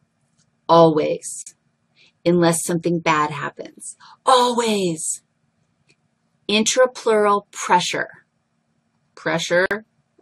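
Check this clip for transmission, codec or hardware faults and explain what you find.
Gap at a join of encoded pieces, at 1.42 to 1.47 s (about 44 ms) and 9.66 to 9.71 s (about 50 ms): separately encoded pieces were butted together untrimmed, leaving encoder delay and last-frame padding as silence. Continuous sound drops out abruptly, smeared at the edges, then resumes where it left off.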